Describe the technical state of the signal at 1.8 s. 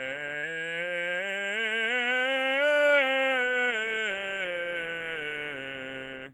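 At 1.8 s the music plays through intact, with no dropout, distortion, glitch or other technical fault in the signal.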